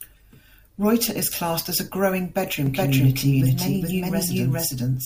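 Doubled audio track from 2.66 s, just after "classed as a growing", to the end: an equally loud copy enters abruptly, trailing about 400 ms behind, likely via a slower second path.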